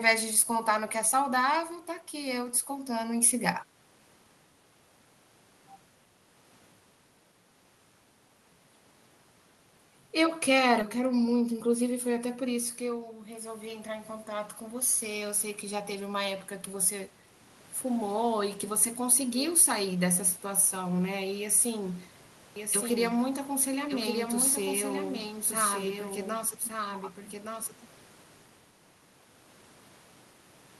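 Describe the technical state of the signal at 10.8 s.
At 10.81 to 10.83 s there is a skip ahead. Playback jumps forward with no gap filled in. Roughly 0.4 s of speech is missing. The audio was likely dropped in transit or by an overflowing jitter buffer, so the two sides join almost directly.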